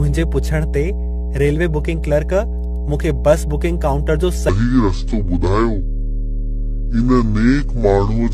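A steady low 60 Hz tone runs through the whole clip at roughly the level of the speech itself. This is mains hum, with power-line current leaking into the signal path.

From the start, the speech sounds swirly, hollow and smeared, with blurred consonant attacks. This is generation loss, likely from several rounds of lossy re-encoding at a low AAC bitrate.

From 4.49 s to the end, the speech turns deep and drawn out, dropping about seven semitones. This section plays at the wrong speed, at 0.625 times its original rate, likely from playback on a mismatched clock.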